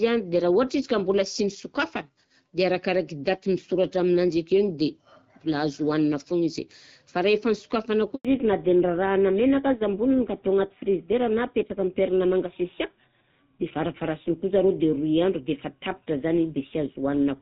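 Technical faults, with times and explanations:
8.15 to 8.25 s, handover gap: right after "izy fa rehefa nosokafana" the speech stops within a few tens of milliseconds and leaves about 100 ms of complete silence. This is the signature of a call moving from one network to another. While the link switches, no speech frames reach the receiver, so nothing can be decoded. Anything spoken in that interval is simply missing, and the sound resumes once the new connection starts delivering frames.
8.25 s to the end, fallback to narrowband: from the moment speech returns after "izy fa rehefa nosokafana", nothing above 4 kHz is present. The voice sounds duller and rougher than before the gap. Up to that point the call had the light coding texture of AMR wideband (HD Voice), consistent with the 12.65 kbit/s mode. After the handover the call dropped to an older narrowband codec, which fits GSM full rate at 13 kbit/s. 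That codec discards the upper band and carries speech with coarser modelling.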